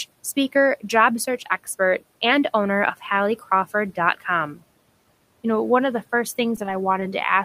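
Short concealed packet loss occurs at 6.56 s, from 6.66 to 6.68 s, and from 7.00 to 7.02 s. Each time about 10 ms of audio arrived too late, and the receiver extended the preceding sound to bridge the gap, leaving a brief smear or wobble.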